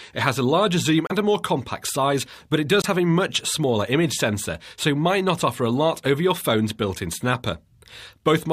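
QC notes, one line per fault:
1.07 to 1.12 s and 2.82 to 2.86 s, Bluetooth stall: the audio drops out cleanly twice, with about 30 ms of silence in the first gap and 23 ms in the second, then carries on from roughly where it left off. That's likely radio interference holding up packets long enough for the headphones' buffer to run empty, so playback just sits there until the resent packets arrive.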